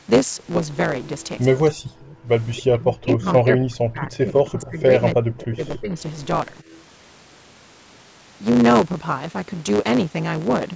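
A block size mismatch (truncated) runs through the whole clip. One stage writes longer blocks than the next one reads, so each block loses its tail. That gives a steady buzz at 109 Hz. The speech also runs 1.09 times fast, with its timbre intact.

From 1.74 to 2.18 s the speech dips sharply, by roughly 40 dB at its deepest. This is likely speech suppressed in double talk. The far side was talking too, and the echo canceller turned everything down.

At 2.54 to 2.63 s an echo leak appears. A faint, delayed copy of the speech comes back 278 ms late, about 20 dB below it. The loudspeaker sound was likely not fully cancelled.

Likely double-talk suppression returns from 2.73 to 4.91 s. The drops reach roughly 30 dB. It likely happens again from 5.13 to 5.95 s, at roughly 25 dB.

Inside that stretch, at 5.76 to 5.80 s, another brief echo likely leaks through. It is also 278 ms late and about 20 dB down. 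A longer, quieter echo, likely another leak, follows at 6.5 to 6.8 s, about 30 dB below the speech. Throughout, the band stops at 8 kHz.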